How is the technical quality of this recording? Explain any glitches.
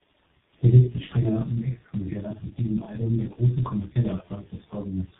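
The quality is poor. Tandem speech coding runs throughout: the speech sounds like two low-rate speech codecs in a row, likely an AMR-type coder followed by G.723.1. The second recodes the first's damage, leaving rough, muffled, warbly speech with nothing above 3.8 kHz.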